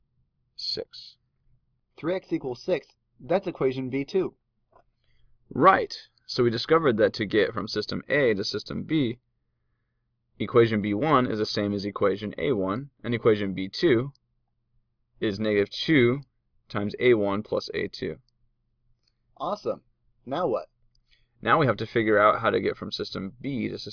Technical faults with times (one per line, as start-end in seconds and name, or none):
none